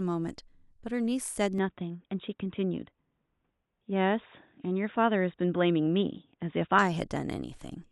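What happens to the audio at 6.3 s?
At 6.3 s the speech sounds dull and boxy, with nothing above 3.8 kHz and a faint new noise floor, but no gap or level jump. It lies within 1.58–6.79 s, where the input switched to a poorer device, likely a narrower-band microphone.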